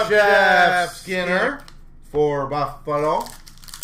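From the very start until 1.48 s, a doubled audio track runs, a full-band copy trailing by roughly 150 ms at somewhat lower level, likely from a second, slower capture path. Unlike echo or reverb, it repeats once, without decay or room colour, and stops abruptly.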